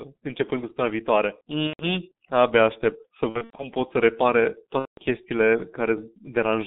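From start to finish the speech passes through a G.723.1 codec, its muffled, hoarse character fitting a roughly 6 kbit/s stream. A spectrogram shows energy confined between 150 Hz and 3.7 kHz, with smeared formants and soft consonant onsets. Between 1.67 and 1.85 s, 3.29 and 3.68 s, and 4.79 and 5.01 s, VoIP packet loss concealed by the speech codec replaces missing audio with an extrapolated buzzy tone or coloured noise that fades. The waveform shows a decaying, repetitive envelope.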